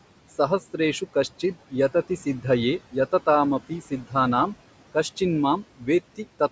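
Speech recorded through call microphone processing, with the spectrogram empty above 8 kHz and room noise sitting about 17 dB below the voice. Throughout, noise suppressor artifacts are audible: the suppressor pulls the steady background down by about 18 dB between phrases and lets it rise under the speech. On a spectrogram this shows as a patchy, speckled noise floor that dims in the gaps and thickens beneath the voice. Speech cut by the noise suppressor occurs between 3.69 and 4.15 s, affecting around a fifth of a second, and again between 5.64 and 5.88 s, for about a tenth of a second. The suppressor mistook quiet parts of the speech for noise and turned them down by as much as about 16 dB, so they sound swallowed. The waveform shows abrupt dips in the envelope at those points, and the spectrogram shows missing or faded speech energy.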